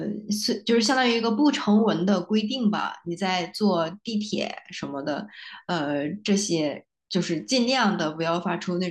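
No audible technical faults.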